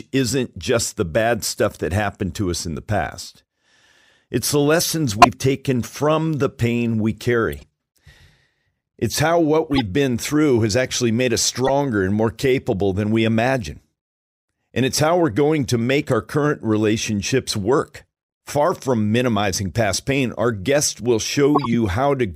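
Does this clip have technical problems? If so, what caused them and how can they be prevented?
Yes. Corrupt frames were decoded: bits flipped inside compressed frames, and the decoder played them as valid, misplacing energy across frequencies. This produces squeaks and noise bursts at 5.12, 7.52, 9.72, 11.65 and 21.55 s, the first the loudest. Checksum-based error detection with concealment of damaged frames would prevent it.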